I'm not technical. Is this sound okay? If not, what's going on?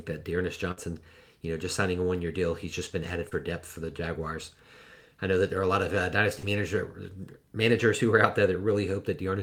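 No. At 0.71 to 0.79 s there is a burst of packet loss: a run of the call's data arrived too late or not at all. The receiver stretched the last sound for about 55 ms while fading it, then skipped ahead, so roughly 60 ms of speech is simply gone.

At 3.29 to 3.33 s and again at 6.39 to 6.45 s there is short concealed packet loss. Smaller pieces went missing, and the receiver filled each hole by continuing the preceding sound, about 24 ms and 37 ms respectively, producing a brief smear or wobble where a short sound can drop out.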